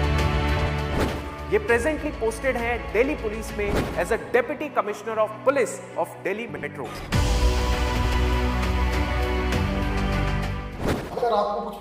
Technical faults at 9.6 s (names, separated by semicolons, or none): none